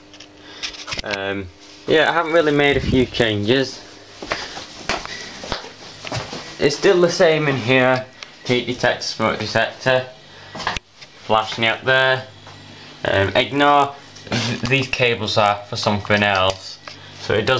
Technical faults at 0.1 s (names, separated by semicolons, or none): none